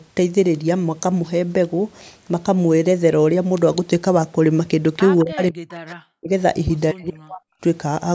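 Speech from a call, band-limited to nothing above 8 kHz, where the far end's echo canceller likely let some loudspeaker pickup through: an echo leak from 5.19 to 5.23 s returns a faint copy of the voice about 211 ms late, roughly 30 dB below the speech. Right after, the canceller likely misread simultaneous talk as echo and turned down both its own talker and the echo, so speech suppressed in double talk follows at 5.24 to 5.77 s, 6.1 to 6.31 s and 6.93 to 7.42 s. In each stretch the voice dips by as much as about 40 dB or drops out in pieces.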